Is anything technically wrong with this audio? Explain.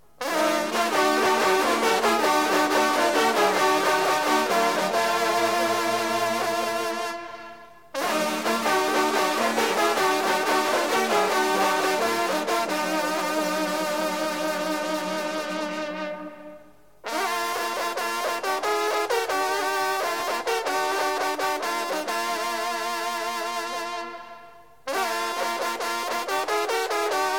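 Yes, there are two skips at 1.26 s and 20.2 s, each a jump in the sound. That's most likely a dropped buffer (overrun), where samples got overwritten before being read and the ends spliced together, losing around 20 ms and 40 ms respectively.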